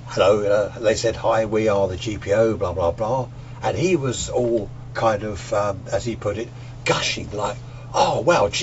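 No technical faults can be heard anywhere in the recording. Nothing in the signal chain calls attention to itself at any point.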